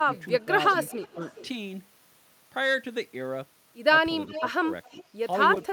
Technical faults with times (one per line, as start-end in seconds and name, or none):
0.05-0.51 speech suppressed in double talk
0.12-0.44 echo leak
0.83-1.48 echo leak
1.14-1.20 speech suppressed in double talk
4.27-5.15 speech suppressed in double talk
4.28-4.50 echo leak
4.84-5.04 echo leak